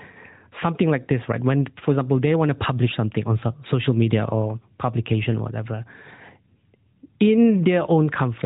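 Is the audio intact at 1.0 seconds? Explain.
Yes, the audio is intact at 1.0 seconds, with the speech carried through a narrowband mobile codec that passes nothing above about 3.8 kHz.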